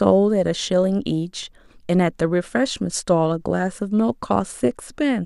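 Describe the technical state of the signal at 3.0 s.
At 3.0 s the signal is intact, with no dropout, distortion, glitch or other technical fault audible at that point.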